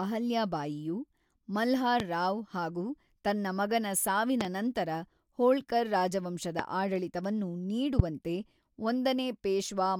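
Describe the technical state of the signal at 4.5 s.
Right after "ಹಾಗೂ ತನ್ನ ಮಗನ", a loud pop, two quick thumps about 15 dB over the speech from 4.41 to 4.47 s, likely a voltage spike, speech continuing underneath.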